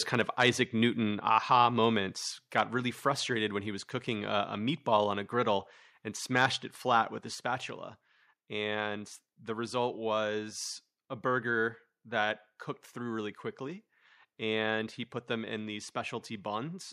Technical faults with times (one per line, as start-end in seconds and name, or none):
0.14-0.49 microphone overload
2.13 microphone volume stepped down
2.58-2.60 microphone overload
6.37-6.46 microphone overload
7.35 microphone volume stepped down